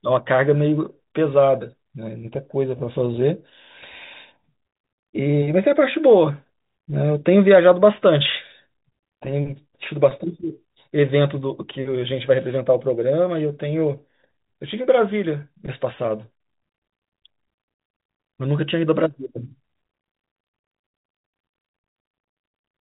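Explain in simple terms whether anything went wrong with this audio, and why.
Nothing went wrong with this speech recording. It carries the sound of an ordinary landline call using G.711 telephone coding, which cuts away everything above about 3.8 kHz and leaves at most a very faint hiss that rises and falls with the sound.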